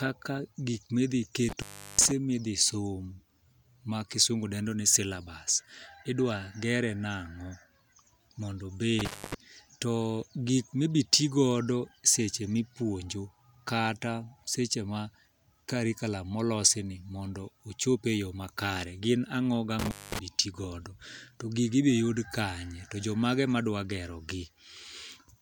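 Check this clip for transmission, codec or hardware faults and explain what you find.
An intermittent contact fault recurs three times, at 1.49–2.11 s, 8.99–9.34 s and 19.79–20.19 s. A loose cable or plug briefly opens the signal path, so the speech cuts out for about 0.37 s, 0.25 s and 0.19 s, with crackle at each break and faint hiss during the gap.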